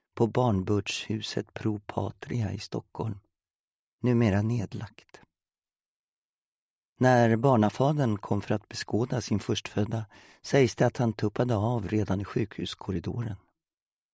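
No technical faults can be heard anywhere in the audio.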